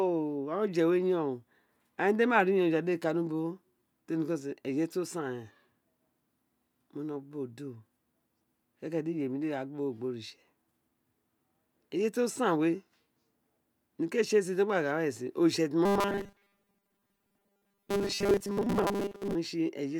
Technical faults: robotic sound from repeated short buffers

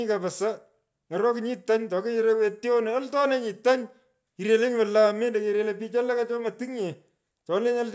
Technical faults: none

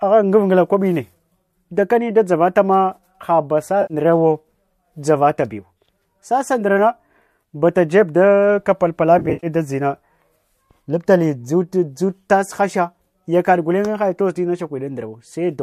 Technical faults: AAC frame loss with concealment

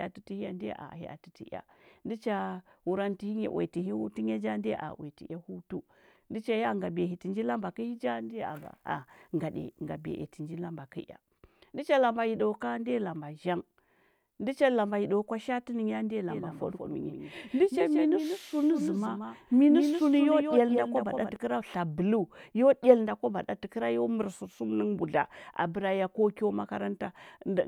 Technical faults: doubled audio track

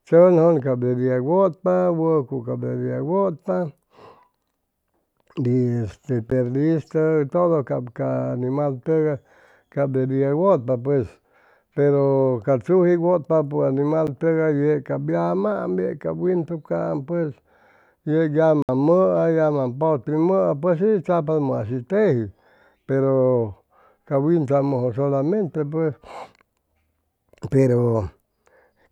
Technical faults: block of digital silence

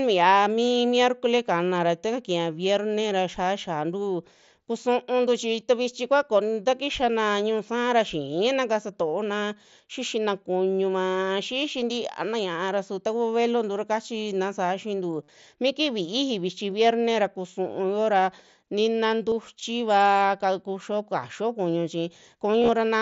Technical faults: concealed Bluetooth headset packet loss

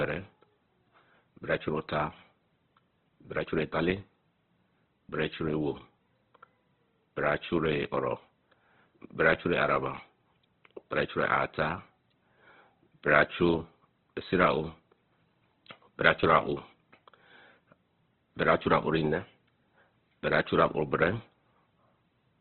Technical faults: Opus compression

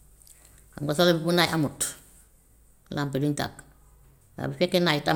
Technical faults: none

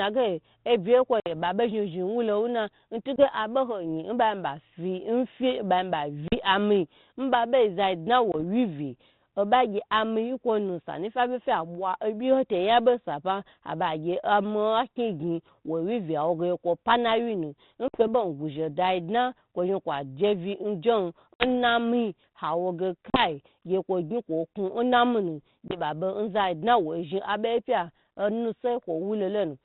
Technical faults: packet loss on an ADPCM call

